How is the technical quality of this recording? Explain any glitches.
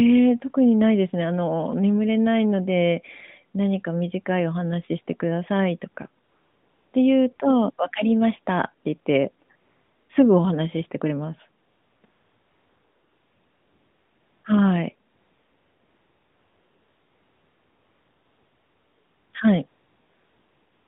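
The speech comes through a narrowband phone line, roughly 150 Hz to 3.7 kHz, with light codec colouring. The main glitch is AMR comfort noise during pauses.

AMR comfort noise occurs at 6.24–6.94, 7.36–7.40, 9.46–9.50, 9.56–10.10, 11.64–12.04, 12.06–14.44, 15.10–19.34 and 19.68–20.88 s. The phone stopped sending speech frames, so the receiver synthesised a smooth, steady hiss that switches in and out in place of the real background.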